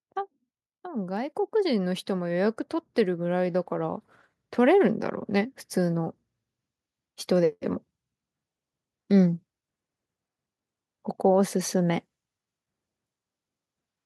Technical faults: automatic gain rising

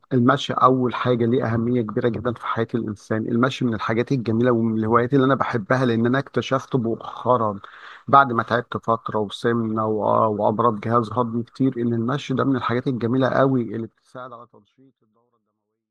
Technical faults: none

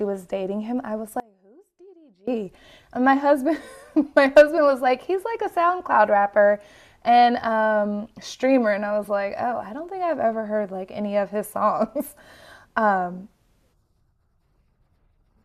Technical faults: audio dropout to a faint residue

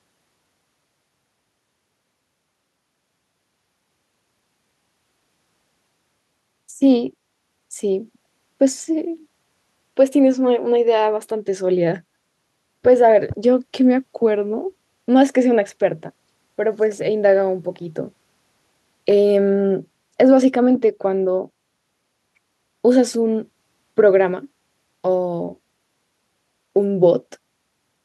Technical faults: none

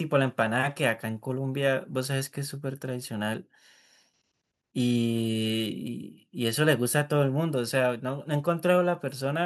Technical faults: none

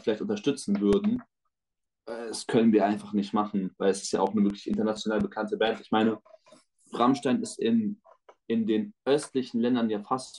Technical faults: CD scratch ticks

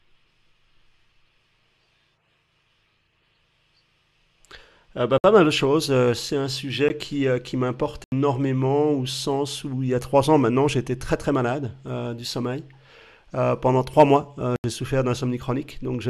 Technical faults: block of digital silence

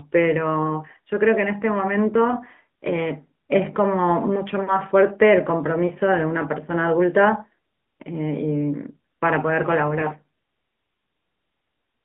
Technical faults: AMR narrowband mobile codec; lost AMR speech frames

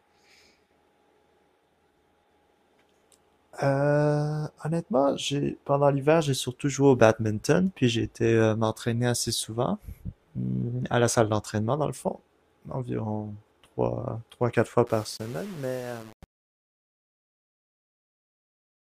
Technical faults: truncation distortion on a fade

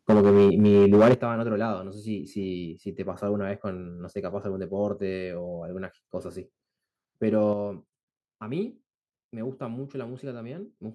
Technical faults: microphone overload; microphone volume stepped down

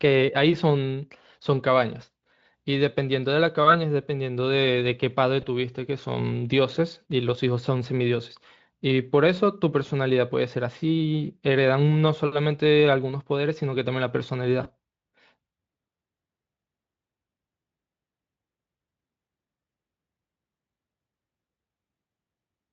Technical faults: VoIP packet loss concealed by the speech codec

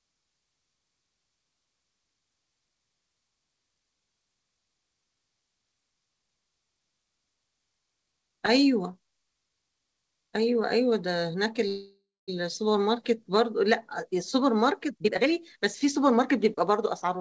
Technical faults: call audio freeze; jitter buffer speed-up

